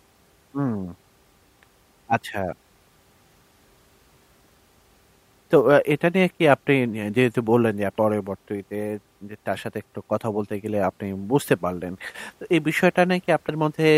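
At 7.98 s and again at 13.49 s the speech jumps forward, losing about a fifth of a second and then about 150 ms, as compressed frames are skipped, which fits several whole 32 ms frames going missing. Unlike a dropout there is no silent gap.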